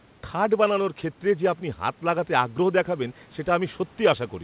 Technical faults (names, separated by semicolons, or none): none